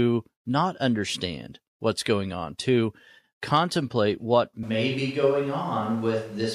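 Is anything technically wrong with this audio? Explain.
Yes. From 4.63 s, right after "on to contemplate what", until the end, the voice suddenly turns roomy and hollow, loses bass, drops by roughly 5 dB, and background noise rises to around 30 dB below the speech. This abrupt change is the signature of a switch to a distant microphone. The close microphone's feed likely dropped out, leaving a farther pickup that captures more room reflections and ambience and less of the voice's low-frequency body.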